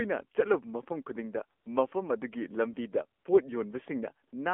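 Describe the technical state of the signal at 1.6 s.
AMR comfort noise fills 1.60 to 1.66 s, just after "ꯆꯠꯂꯨꯕ ꯃꯐꯝ ꯈꯨꯗꯤꯡꯗ". For about 60 ms the sender treated the talker as silent and stopped sending speech frames, so the receiver substituted smooth synthetic noise that switches in and out, replacing the real background.

Around that gap, the AMR narrowband mobile codec shapes the whole signal. Speech is confined to roughly 250 Hz to 3.4 kHz, and the plainly audible buzzy, synthetic coloration fits a low-rate mode near 7.4 kbps, where a few pulses per subframe drive a vocal-tract model.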